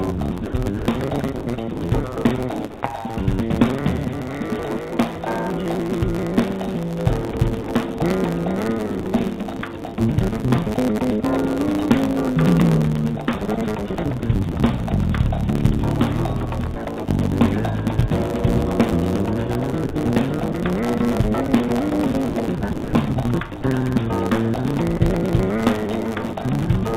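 From start to finish, a block size mismatch (truncated) means one stage writes longer blocks than the next reads, so each block's tail is discarded. The result is a steady buzz at 109 Hz and audio running 1.09 times too fast at roughly normal pitch.

Over the stretches at 0.46 to 2.81 s, 7.31 to 7.99 s, 9.00 to 9.98 s, 14.20 to 14.55 s, 16.74 to 16.98 s, 19.72 to 20.54 s and 22.29 to 23.63 s, the sender's voice detector likely toggled transmission repeatedly, producing sound chopped by the voice detector. Quiet portions are swapped for comfort noise, about 520 ms in the first stretch, 380 ms in the last and 60 to 140 ms elsewhere. The sound turns choppy, all within a call-codec band that holds nothing above 4 kHz.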